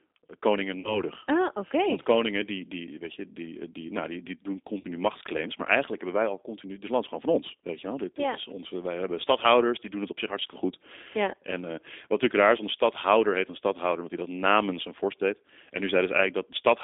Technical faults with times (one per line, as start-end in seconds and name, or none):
0.00-16.83 G.729 codec
0.80-1.02 VoIP packet loss concealed by the speech codec
4.79-4.86 VoIP packet loss concealed by the speech codec